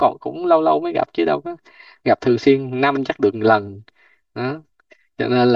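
Throughout the speech, channel delay (comb filtering): one channel trails by roughly 3 ms, so the mono sum sounds hollow, with evenly spaced dark notches from around 150 Hz on a spectrogram.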